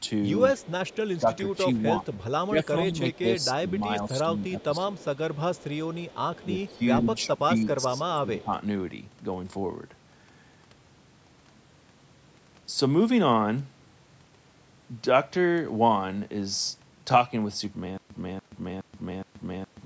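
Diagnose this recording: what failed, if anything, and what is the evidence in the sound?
The far end's acoustic echo canceller, in the call processing stage, likely left residual echo: a faint copy of the speech trails by about 128 ms, about 25 to 30 dB down, at 0.57–1.57 s, 2.12–2.25 s, 3.13–3.73 s and 4.6–7.38 s. It is an echo leak.

The same canceller also shows speech suppressed in double talk, likely from it mistaking the talker's speech for loudspeaker echo while both sides overlap. The speech dips by as much as roughly 10 dB across 1.19–5.04 s and 6.49–8.52 s, patchy rather than continuous.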